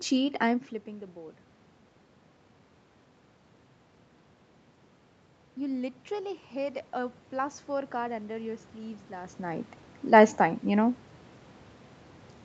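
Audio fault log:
5.56–9.76 s automatic gain rising: the speech and the room noise behind it swell together by about 8 dB over roughly four seconds, because the automatic gain control judged the input too quiet and kept stepping its gain up. Since the control scales the whole signal rather than the voice alone, the background climbs in step with the speech. That shared, gradual lift is what separates it from the talker's own change of distance near 9 s, which alters only the voice.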